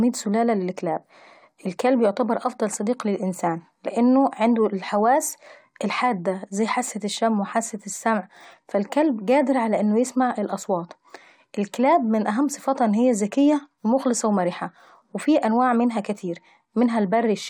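No technical faults occur at any point in this speech recording.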